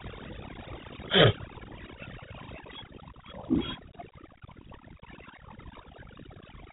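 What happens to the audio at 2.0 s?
At 2.0 s the speech carries two faults that run through the whole clip. The first is overdone noise removal. A noise reduction stage pushed too hard has pulled individual frequency bands down or out wherever they sat close to its noise estimate, and it took the quieter parts of the voice with them. The gaps between syllables drop to near silence with small twinkling specks. A spectrogram shows a blank, dark background scattered with isolated bright dots, and the harmonics look patchy.

The second is G.726 ADPCM coding. The codec stores each sample as a small difference from an adaptive prediction. With so few bits, the coarse steps leave a harsh, rasping hiss that rises and falls with the speech level, and the plainly audible damage fits 24 kbit/s. Nothing above 3.8 kHz survives. On a spectrogram the energy stops at a hard ceiling near 3.8 kHz, with a grainy noise haze under the voiced regions. 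The waveform looks rough and fuzzy on its peaks.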